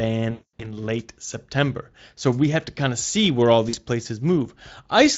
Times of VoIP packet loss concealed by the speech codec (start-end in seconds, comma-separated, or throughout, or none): 0.31-0.78, 3.69-3.77